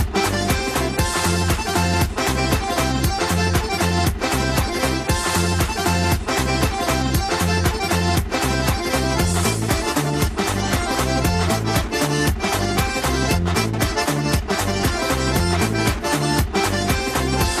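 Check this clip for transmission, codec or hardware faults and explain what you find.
Two kinds of fault are present: a steady codec coloration across the whole clip, and two brief bursts of reception damage on top of it.

MP2 compression, throughout: the audio sounds dull, gurgling and granular, likely from MPEG Layer II coding at a low rate, around 80 kbps by the sound of it. Too few bits for 32 sub-bands shut off the upper bands and leave the rest coarsely quantised.

DAB burbling, 4.55 to 4.89 s and 10.60 to 11.04 s: corrupted bits from weak reception slip past error correction, at a rate of a fraction of a percent. Faulty samples then put short blips of noise in single sub-bands, and faulty scale factors make sub-bands jump in level for up to a frame, giving blips of noise and level jumps over the sound.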